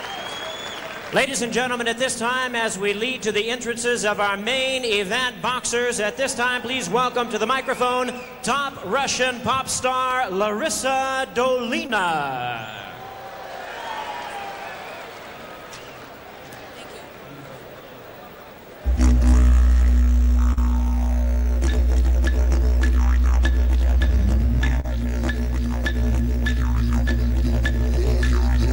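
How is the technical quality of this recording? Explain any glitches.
Three brief glitches are audible, all short concealed packet loss, at 11.87–11.90 s, 20.53–20.58 s and 24.80–24.85 s. In each, 20 to 30 ms of audio arrived too late, so the receiver extrapolated the preceding sound and blended back, leaving a brief smear or wobble.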